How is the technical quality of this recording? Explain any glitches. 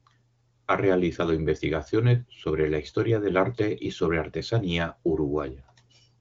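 No glitches or faults heard.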